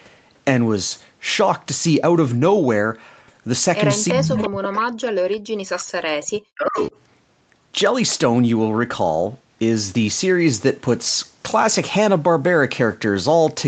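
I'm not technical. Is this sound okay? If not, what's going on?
No. There are two problems. The first is an echo leak: short, delayed copies of the speech, trailing about 0.35 seconds behind, at 4.08–4.13, 4.36–4.5, 6.23–6.39 and 6.76–6.9 seconds. The one at 4.36 is fairly loud and the later two are faint. The likely cause is a loudspeaker on one end whose echo canceller let some sound slip back.

The second is speech suppressed in double talk. From 4.13 to 5.91 seconds, and again from 6.51 to 6.8, the voice ducks down to nearly nothing in patches. That's likely the echo canceller getting confused while both sides talked at once, so it turned everything down.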